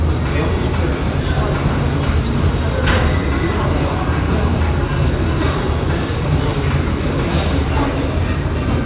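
No technical faults can be heard in this audio.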